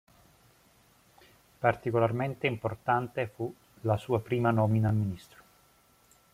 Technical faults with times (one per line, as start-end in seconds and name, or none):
2.37-2.39 overlapping chunks
4.89-4.91 overlapping chunks